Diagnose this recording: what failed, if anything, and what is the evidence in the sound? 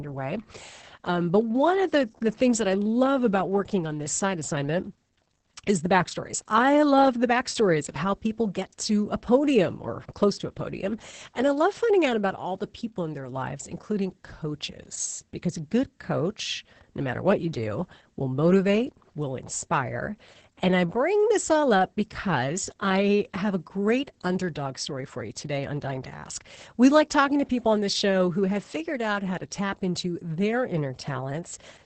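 The codec stage failed: Opus voice compression runs through the whole speech clip. Nothing survives above about 8.7 kHz, which fits SILK's wideband mode, and the voice sounds muffled, hoarse and slightly robotic. That points to a low bitrate, around 10 kbps, where the linear-prediction coder rebuilds the excitation only coarsely. A plain low-pass filter or band-limited microphone would dull the top end but leave the voice smooth. The grainy, synthetic texture here comes from heavy coding.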